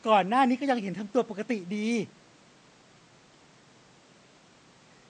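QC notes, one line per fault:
Nothing stood out on listening to the speech.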